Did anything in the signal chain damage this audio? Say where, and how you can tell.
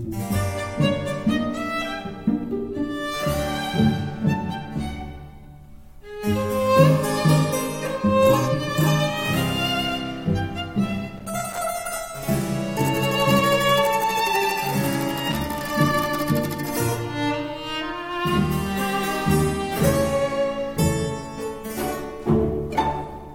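Yes, loose connector crackle in the analogue wiring. There are two short bursts, at 11.17 to 11.59 s and 15.31 to 15.69 s, with ragged, irregular scratching. A worn or dirty contact is opening and closing as the cable moves, chopping the signal on and off.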